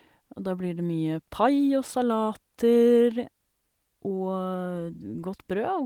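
No technical faults can be heard anywhere in the speech.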